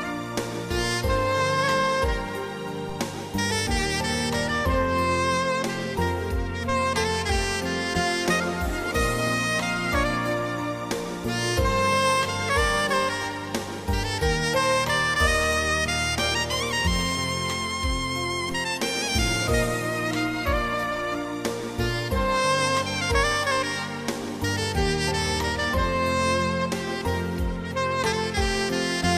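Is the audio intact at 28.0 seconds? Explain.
Yes, at 28.0 seconds the audio plays through cleanly, with no dropout, click, distortion or other break to be heard at that moment.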